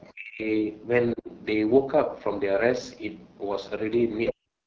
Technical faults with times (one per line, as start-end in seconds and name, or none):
0.00-4.66 AMR wideband (HD Voice) codec
0.04-0.13 other side's voice leaking through
0.12-0.46 speech suppressed in double talk
1.15-1.29 speech suppressed in double talk
4.14-4.33 other side's voice leaking through
4.33-4.66 speech suppressed in double talk